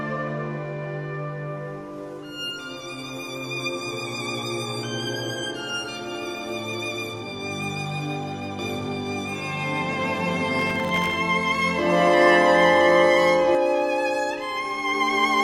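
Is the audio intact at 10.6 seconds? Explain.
No. From 8.59 to 13.55 s there's a doubled audio track: a second copy at roughly the same level trails about a second and a half behind, dry and full-band, cutting in and out abruptly. That's likely a slower second capture path feeding the mix. On top of that, from 10.59 to 11.14 s there's processor overload crackle. The processor misses a few dozen tiny buffer deadlines in a row, each under a millisecond, and each miss drops in a sliver of silence, so you hear a short gritty tearing riding over the sound.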